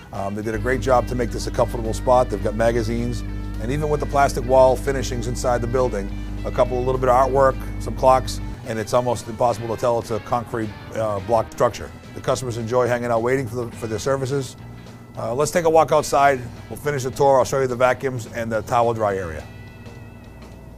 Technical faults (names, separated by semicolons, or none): mains hum